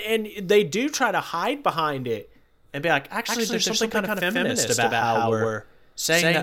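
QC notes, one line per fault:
3.29 s to end, doubled audio track: just after "it and be like", a second full-band copy of the speech suddenly appears about 150 ms behind the original and at much the same level, giving a hard, stuttering double. Unlike an echo or reverb, the copy never decays, adds no room colour and starts abruptly. A second capture through a slower path, or an edit leaving two out-of-step copies, is the likely cause.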